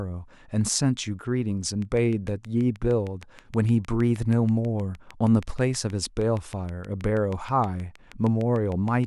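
Speech, with a train of clicks running from 1.82 s to 9.05 s: around fifty near-identical ticks at a steady 6.4 per second, peaking a few decibels above the speech and audible in pauses, likely from nearby equipment interference. Their even spacing and uniform shape distinguish them from random crackle.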